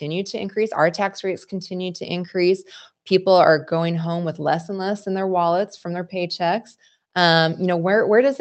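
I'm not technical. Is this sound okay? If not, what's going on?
Yes, no faults here.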